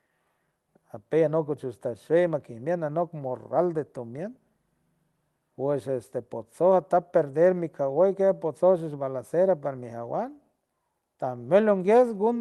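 Speech, with no technical faults to report.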